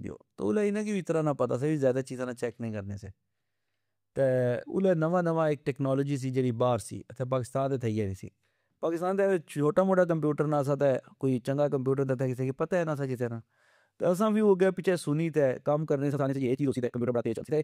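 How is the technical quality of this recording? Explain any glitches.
One glitch affects the final stretch. From 16.08 s to the end, just after "سنی تہ کم کرنے", a time-stretched section runs at about 1.9x pace with unchanged pitch, sounding rushed, likely from software dropping short pieces to shorten it.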